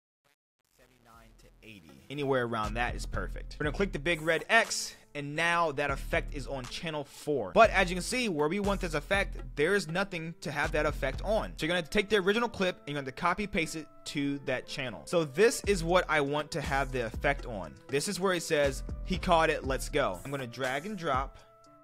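The audio opens with a fade-in reaching full level at 2.3 s, and that fade carries truncation distortion from 0.00 to 2.30 s, worst up to 2.07 s. The quiet early part turns gritty, which fits a gain stage rounding to about 9 bits without dither.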